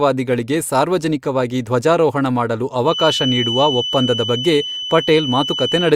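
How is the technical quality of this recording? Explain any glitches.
The recording has one clear fault in its latter part. From 2.83 s, just after "ಸಾರ್ವಜನಿಕವಾಗಿ ಧ್ವಜಾರೋಹಣ ಮಾಡಲು", a feedback whistle starts and runs to the end. It is a thin, steady 3 kHz tone sitting only a little below the speech, swelling and fading slowly in level. The likely cause is a loudspeaker-to-microphone loop held right at the edge of feedback. One frequency keeps ringing without building up.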